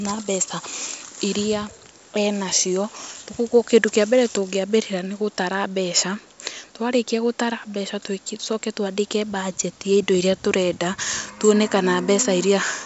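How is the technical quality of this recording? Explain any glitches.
No faults can be heard.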